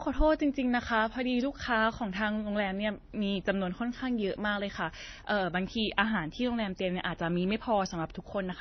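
Across the whole clip, the speech carries layered compression damage. Nothing is heard above about 6.1 kHz, so sibilants sound dull and muffled. Over that sits a mix of artefacts: the damage of each codec stage is heard together. These point to transcoding between lossy codecs, likely a low-rate MP3 stage near 24 kbit/s re-encoded to AAC-LC at around 48 kbit/s. The later encoder spends bits preserving the earlier damage. It cannot restore the lost top end.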